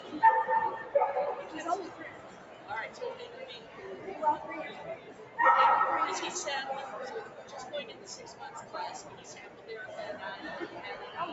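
Throughout the clip a noise suppressor designed for speech is working on sound it was never meant for. It treats steady, sustained material as noise and keeps pulling it down, so the level swings by around 10 dB. Attacks mostly come through while held portions sag, which gives a pumping, thinning quality. Unlike a codec dropout or a hard gate, the sound never vanishes. It dips and recovers with the content.

At specific moments the suppressor cuts this sound harder: 1.39–1.54 s, 1.9–3.79 s (the longest, with a drop of about 7 dB), 4.96–5.38 s, 7.25–7.53 s, 7.9–8.74 s and 9.09–9.69 s, each dipping by about 6 dB. Sustained parts and decaying tails sink or are cut short, while sudden onsets mostly come through. A level fade or a dropout would not spare those onsets. The missing top above 8 kHz comes from the call path's bandwidth, not from the suppressor.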